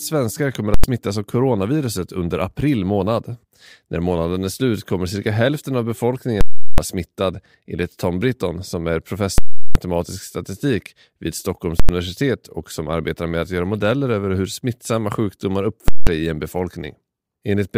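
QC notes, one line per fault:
0.74–0.84 s (after "svenskar kommer"), 6.41–6.78 s, 9.38–9.75 s, 11.80–11.89 s, 15.88–16.07 s: invalid numbers at full scale. Infinite or invalid calculation results pinned the output flat at one extreme, far beyond the speech peaks. This gives a very loud pop at each block's start and end with no sound between. The lengths of 93, 372 and 186 ms fit 4096-, 16384- and 8192-sample blocks.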